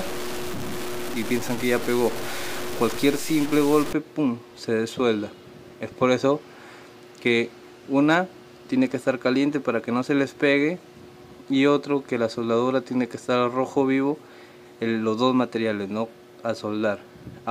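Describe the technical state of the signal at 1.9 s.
At 1.9 s the signal is inside a stretch of low bit depth without dither running from 0.0 to 3.93 s. It sounds coarse and grainy, with distortion that tracks the sound and sits only about 10 dB below it. The likely cause is truncation to around 5 bits with no dither applied.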